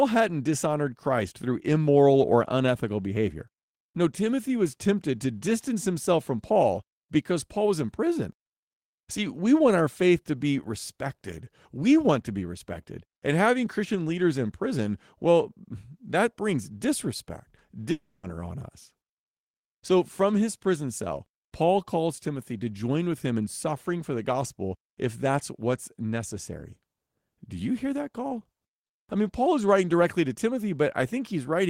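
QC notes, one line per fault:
17.91–18.26 s, long network dropout: the stream likely stopped delivering audio here, so about 0.32 s of speech after "well that brings disrespect" never reached the listener. The receiver covered the gap by extending the last sound it had, which comes out as a fading buzz rather than speech, ending in a very brief silence of about 10 ms. Speech then resumes at "on us" with the lost stretch simply skipped.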